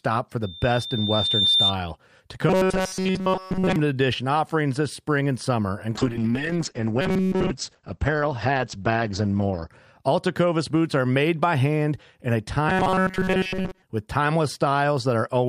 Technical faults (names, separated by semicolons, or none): loudspeaker feedback squeal; robotic sound from repeated short buffers; call bitrate drop